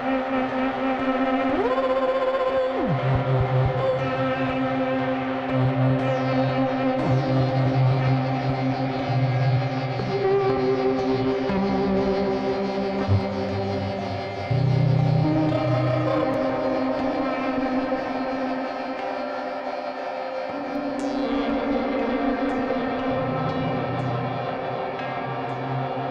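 At 16.34 s there's a block of digital silence, just 2.9 ms long, which fits a 128-sample buffer going out empty, most likely because the program didn't fill it in time. The audio drops straight to zero and comes straight back with no fade, so both edges land hard. At that length you don't hear a hole at all. It comes across as a tick or dip.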